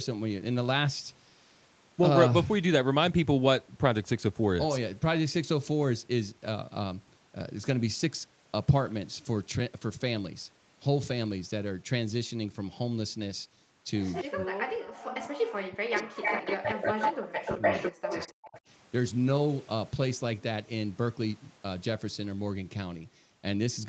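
Around 14.14 to 14.24 s a delayed copy of the voice slips through, roughly 209 ms late and only about 5 dB below it, which sounds like an echo leak, likely from a loudspeaker echo canceller not catching everything. It returns as a faint scrap at 15.25 to 15.29 s, about 20 dB down, then from 15.9 to 18.6 s as a strong echo at about the same level as the speech, now trailing by 282 ms.

From 14.24 to 18.56 s the voice keeps dipping and breaking up, with drops as deep as about 40 dB adding up to around three seconds. That's speech suppressed in double talk, likely the canceller pulling everything down while both sides talk at once.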